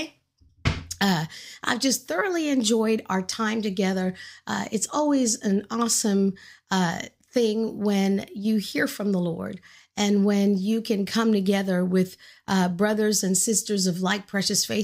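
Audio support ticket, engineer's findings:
Jump at 12.48 s, between "can come together with" and "brothers and". Likely a dropped buffer (overrun): capture read too late, about 20 ms overwritten, edges spliced. Waveform shows a step discontinuity with no gap; spectrogram shows a thin full-band vertical line.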